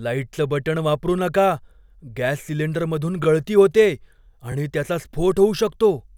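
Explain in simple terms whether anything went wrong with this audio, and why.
Two brief stutters, each like a tiny click or catch, occur at 3.24 s, between "गॅस सिलिंडरमधून" and "गळती होतेय", and at 4.52 s, right after "गळती होतेय". Each is a repeated buffer: fresh audio arrived late, so the device replayed a short slice once, which fits a 20 ms buffer.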